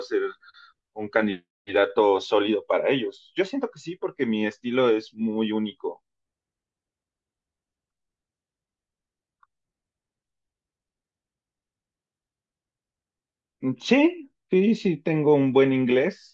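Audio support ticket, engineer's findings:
No faults heard in this recording.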